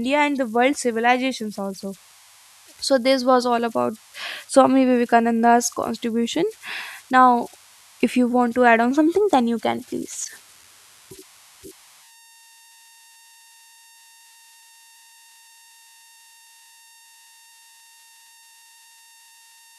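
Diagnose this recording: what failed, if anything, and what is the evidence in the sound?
The converter failed, producing idle tones throughout this speech: a whistle around 1 kHz, about 29 dB below the signal, from undithered delta-sigma modulation cycling on small inputs.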